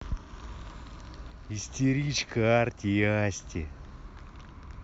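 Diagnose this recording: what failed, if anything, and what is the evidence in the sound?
A sudden gain jump runs from 1.30 to 1.69 s. The speech and its background noise drop together by about 4 dB in a single step, then step back up. The likely cause is a digital gain change in call processing applied without a ramp.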